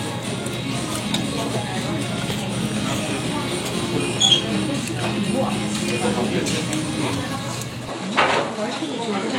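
At 7.89 s the sound turns slightly duller and stays that way to the end. This is most likely an input switched to a poorer device: the recording chain moves to a capture path with a narrower band. Nothing above 11.4 kHz survives, and a faint new noise floor appears, far below the signal. On a spectrogram the top band ends abruptly at 7.89 s. The waveform shows no gap and no obvious jump in level.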